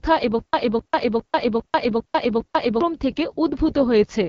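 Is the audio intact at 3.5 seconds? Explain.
No. At 3.5 seconds the speech carries AMR wideband (HD Voice) codec damage, present throughout the clip. The codec rebuilds speech up to 6.4 kHz from a pulse-driven model of the vocal tract and fills the band above with shaped noise. Nothing is heard above about 7.2 kHz. The damage is plainly audible: the speech sounds rough and raspy, which fits one of the codec's lowest modes, around 8.85 kbit/s.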